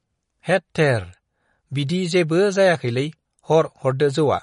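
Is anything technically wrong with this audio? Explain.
Yes. Throughout the speech there is plainly audible damage from what is likely MP3 compression. Nothing remains above 10.6 kHz, a hard treble ceiling set by an encoder short of bits, which fits a low bitrate of around 40 kbps. Weak frequency lines are dropped and restored from frame to frame, so the sound turns watery and swirly, with metallic chirps on s sounds and smeared consonant attacks. A plain low-pass filter would dull the top end the same way but leave no swirling or chirps.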